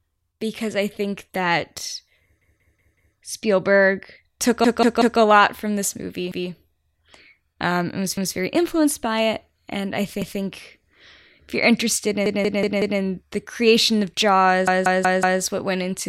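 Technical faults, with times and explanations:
2.42–3.16 s, 4.64–5.20 s (after "took a", before "lot from this"), 12.26–13.00 s (after "if you're interested", before "the creation of"), 14.68–15.42 s (after "the creation of", before "what went into the"): repeated buffer. The same 0.19 s slice plays five times (four times at 4.64 s) with a hard join at each repeat. This is a stutter, which fits an 8192-sample buffer replayed while new audio was late. It differs from an echo because the copies are identical rather than fading.
6.32–6.50 s, 8.17–8.36 s, 10.22–10.40 s: repeated buffer, the same 0.19 s slice played twice. It is heard as a brief hiccup with a hard join. It is not a dropout, since there is no silent gap and nothing afterwards seems skipped. The speech resumes exactly where the repeat began.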